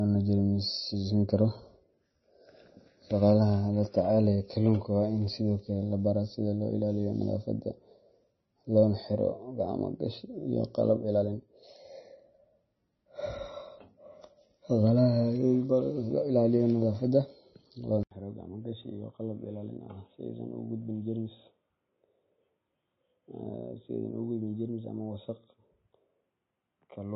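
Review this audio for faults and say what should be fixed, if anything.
The whole clip of speech has the watery, swirly texture of heavy MP3 compression. Nothing comes through above 5.9 kHz, so the encoder has cut off the top end, and the weak frequency lines flicker in and out from frame to frame, and attacks smear. The amount of damage points to a low bitrate, something around 24 kbps. To prevent it, keep the recording in a lossless format, or encode at a much higher bitrate.

At 18.03 s there's a gap of about 80 ms, and from there to the end the sound turns dull and boxy. The input was likely switched to a poorer device, such as another mic or a headset's call profile. After the gap nothing comes through above 3.8 kHz, the level drops by roughly 10 dB, and a faint new noise floor appears. To prevent it, pin the input device in the system settings so it can't switch partway through a recording.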